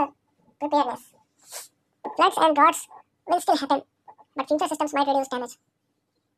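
From start to finish the speech is read two samples at a time, so it plays at double speed, an octave up.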